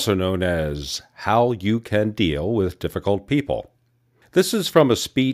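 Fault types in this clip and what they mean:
Nothing stood out on listening to this speech recording.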